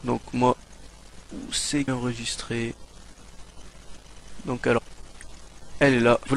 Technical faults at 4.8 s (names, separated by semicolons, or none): damaged data in a compressed stream